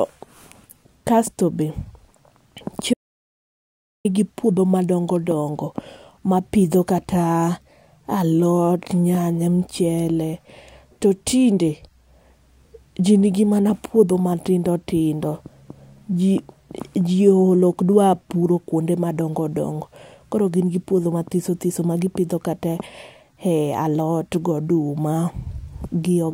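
An audio dropout to silence from 2.94 to 4.05 s, likely a lost input, cuts speech off; unlike a pause, no room tone remains before "puodho madongo dongo".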